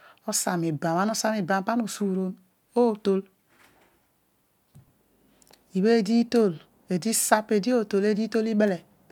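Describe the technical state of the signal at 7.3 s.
At 7.3 s the speech signal is intact, with no dropout, clipping, distortion or other fault audible at that point.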